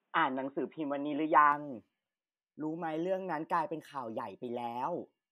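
Input switched to a poorer device, 0.0 to 1.52 s: speech sounds boxy, cut above 3.8 kHz, likely from a narrowband microphone, then clears without a gap.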